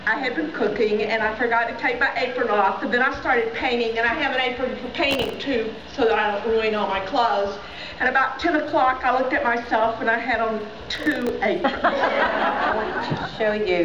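Around 5.11 to 5.34 s, and again from 10.95 to 11.29 s, there's processor overload crackle: the system keeps missing deadlines on tiny buffers, which sound like about a millisecond and a half each, and replays stale slices with hard edges, giving a gritty tearing burst.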